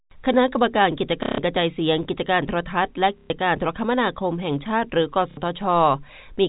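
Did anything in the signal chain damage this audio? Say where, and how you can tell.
Yes: robotic buzzing stutters at 1.23–1.38 s, 3.18–3.30 s and 5.31–5.37 s show packet loss with last packet repeated in the network, with stutter lengths consistent with 30 ms packets.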